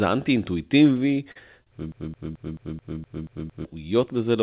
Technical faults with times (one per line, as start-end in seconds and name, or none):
0.92-1.68 repeated stalls (stutter)
1.92-3.65 broken-record loop
2.81-3.31 jitter buffer slow-down